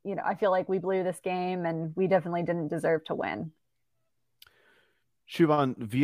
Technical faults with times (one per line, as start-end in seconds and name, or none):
none